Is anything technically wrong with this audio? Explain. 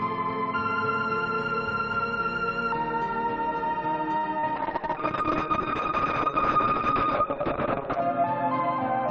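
Yes. The music passes through a WebRTC call path using Opus, and three faults cluster from about 4.2 s onward.

Short stall from a late packet, 4.17 to 4.25 s: a packet arrived late and the jitter buffer emptied, so the receiver held the last sound for 58 ms and then resumed from the same point. Nothing is lost, but the music hangs briefly, and everything after sits 58 ms later. A spectrogram shows the harmonics frozen flat across that stretch. The waveform repeats near-identical cycles there.

Short concealed packet loss, 4.39 to 4.52 s: 40 ms of audio never reached the decoder in time. The receiver filled 35 ms by extending the preceding sound, then crossfaded back into the real signal, adding a little time overall. It is heard as a quick smear or wobble. The spectrogram shows a blurred patch where partials lose their detail and fade before the true signal resumes.

Call bitrate drop, 4.57 to 8.08 s: the call's bandwidth estimate fell and the encoder was pushed to far fewer bits. 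The coarse sound fits a fall from roughly 32 kbps to about 7 kbps, held at its lowest for 3.44 s. The coded bandwidth narrows from 12 kHz to 6 kHz, so the music turns muffled and watery. On a spectrogram, the region above 6 kHz goes empty as if cut off sharply, and what remains looks blotchy.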